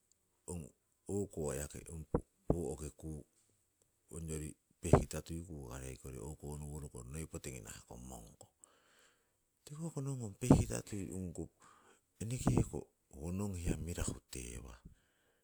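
No technical faults can be heard anywhere in this speech recording. The sound holds steady throughout, with no moment that stands out as a fault.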